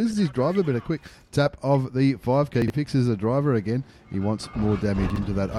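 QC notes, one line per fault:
2.62–2.70 s and 5.10–5.18 s, chunks out of order. A 20 ms piece plays about 60 ms late. The sound jumbles briefly, with three hard joins.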